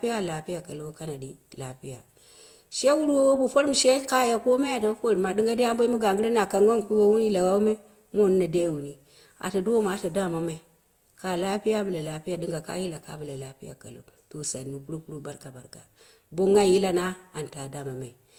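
Right through the speech there's a doubled-up mix of codec artefacts, most likely from transcoding between lossy codecs. It sounds like a Vorbis encode near 64 kbit/s re-encoded to Opus around 32 kbit/s. Opus spends bits on the Vorbis artefacts while adding its own, and there's nothing above 20.1 kHz.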